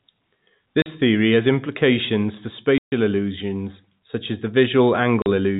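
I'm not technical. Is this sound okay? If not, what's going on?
No. The speech has packet loss filled with silence. Bits of sound got lost on the way and were replaced by silence. There are short holes at 0.82 s, just before "theory has implications for", and at 5.22 s. A longer 140 ms hole comes at 2.78 s, right after "theory has implications for". Each hole starts and stops abruptly. The holes fit 20 ms packets. The phone-line sound quality itself is normal.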